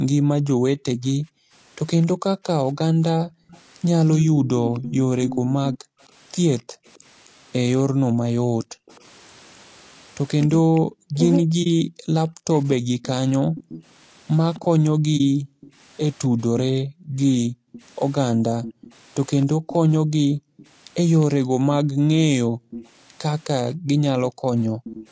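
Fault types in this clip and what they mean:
Low-delay AAC compression: Throughout, the speech sounds rough and grainy, with a hiss-like fill between the harmonics and a thin, somewhat synthetic top end. The likely cause is AAC-ELD, the low-delay codec of video calls. Its short frames resolve pitch poorly, and the damage points to a bitrate around 32 kbps. This is a constant texture across the clip, which sets it apart from the brief holes of frame loss or the level swings of echo-canceller gating.
Background gated by the echo canceller: The room sound behind the speech drops sharply, by about 40 dB at the deepest, and then comes back. This happens from the start to 1.53 s, between 3.19 and 6.85 s, and from 13.37 to 24.84 s, with about 1, 1 and 4 seconds affected. The canceller clamps the microphone while the far side's loudspeaker plays. Only the background ambience pumps. The speech is not carved up, which separates this from double-talk suppression.
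Echo leak: A delayed copy of the speech trails it by about 260 ms. It is loudest from 2.02 to 6.99 s, at around 10 dB below the speech. It is faint from 8.93 to 10.8 s and moderate from 13.57 s to the end. The likely cause is a loudspeaker-using side whose echo canceller let part of its microphone pickup through. The repeat comes at a fixed lag, which marks it as echo rather than reverberation or gating.
Speech suppressed in double talk: Between 7.98 and 13.09 s, the speech itself dips deeply, down by roughly 40 dB. These dips add up to roughly 3 seconds. The likely cause is both sides talking at once, so the echo canceller could not tell the local talker from loudspeaker echo and turned everything down. Here the speech is cut up, not just the room sound behind it.
AAC frame loss with muting: There are two short, soft-edged holes, at 11.63 s and 15.17 s. Each is about 30 ms long and fades out and back in. 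Each comes from one lost AAC frame whose spectrum the decoder zeroed, with the overlapping windows smoothing the edges. These gaps are single and very brief, and they hit the speech and the background together. That distinguishes them from the longer, shaped dips of echo-canceller suppression.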